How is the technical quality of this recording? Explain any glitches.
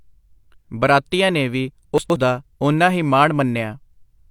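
The recording has one clear glitch, a short stretch of chunks out of order. From 1.98 to 2.16 s, after "ਬਰਾਤੀਆਂ ਨੇ ਵੀ" and before "ਦਾ ਉਨਾ ਹੀ", one 60 ms chunk plays two chunks late. The speech jumbles briefly across three hard joins. Unlike a dropout or skip, nothing is missing. The same sound simply arrives in the wrong sequence.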